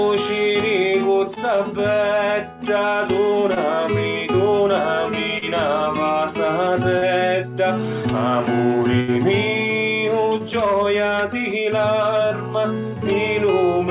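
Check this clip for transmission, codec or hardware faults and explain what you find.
Two kinds of packet loss are audible. The sound passes through a narrowband call codec, with nothing above 4 kHz, which fits G.711.

Short concealed packet loss occurs at 1.34, 3.54, 5.38, 6.98, 10.38 and 12.28 s. Each gap is 20 to 40 ms. The receiver extends the preceding sound to cover the hole, then blends back in. Each one is a brief smear or wobble.

A burst of packet loss runs from 9.00 to 9.10 s. About 80 ms never arrived. The receiver stretches the last sound and fades it as the gap lasts. You hear a held buzz or fading hiss, then the audio jumps ahead.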